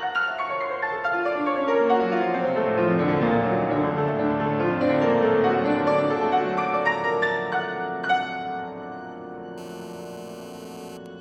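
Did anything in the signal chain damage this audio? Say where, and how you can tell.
Yes. From 9.58 to 10.97 s, GSM phone buzz enters at the analogue wiring: a hard, raspy 217 Hz buzz with dense harmonics, about 23 dB below the signal. A nearby 2G phone in a call pulses its transmitter, and the circuitry rectifies each pulse. Mains hum would sit at 50 or 60 Hz instead.

At 11.06 s, GSM signalling bursts produce a single brief tick about 20 dB down, through the same analogue path. With the phone's user silent in the call, only short burst groups are sent, so the rectified interference is a tick rather than sustained buzz. Its 217 Hz burst timing distinguishes it from a digital click.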